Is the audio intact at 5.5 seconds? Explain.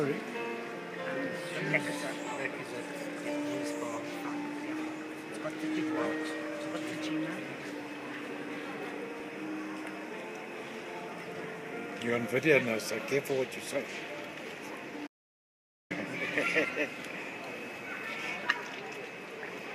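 Yes, the audio at 5.5 seconds is intact, with no dropout, click, distortion or other fault at that point.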